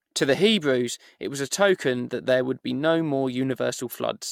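From start to finish the speech carries generation loss, likely from repeated decoding and re-encoding through AAC-LC at around 96 kbit/s, perhaps five or so passes. Each pass quantises on a shifted frame grid, so the errors stack: a swirly, hollow texture, smeared consonant onsets and nothing above 17 kHz. A single encode at that rate would sound far cleaner. The accumulated swirl and blurred attacks, not just the band limit, set this apart from a one-pass low-bitrate encode.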